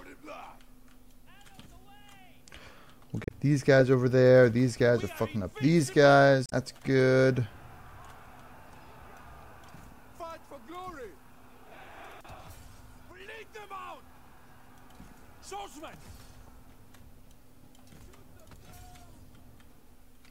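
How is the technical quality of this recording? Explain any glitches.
Three short glitches stand out, so the quality isn't clean throughout.

Around 3.23 to 3.31 s and again at 6.46 to 6.52 s there's damaged data in the compressed stream: the decoder loses sync on corrupted frames, giving a brief audible glitch.

At 13.12 to 13.20 s the level dips by about 6 dB, likely because one channel drops out momentarily before the mono sum.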